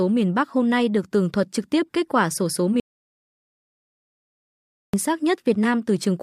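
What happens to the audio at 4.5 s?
At 4.5 s there is an audio dropout to silence. It runs from 2.8 to 4.94 s, just after "kết quả sổ số". The input was likely lost, leaving silence with no room tone.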